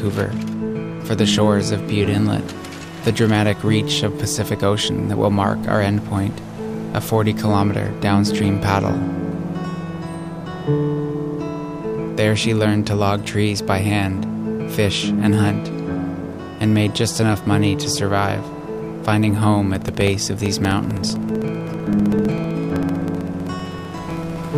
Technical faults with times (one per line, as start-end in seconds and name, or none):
19.75-24.49 periodic USB or driver dropouts